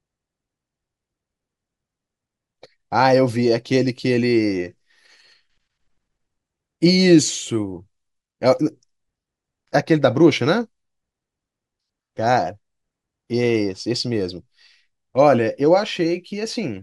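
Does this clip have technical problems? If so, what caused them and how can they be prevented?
No, nothing in this speech recording points to a technical fault, so there is no cause to trace and nothing to prevent.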